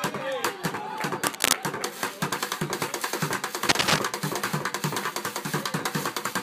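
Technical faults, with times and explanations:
1.25–1.53 s and 3.69–3.99 s, cable scratch noise: Dense, ragged bursts of crackle sit over the sound for about a third of a second each time, roughly 5 dB above it. A worn cable or connector being moved, with its contact resistance jumping rapidly, is the likely cause.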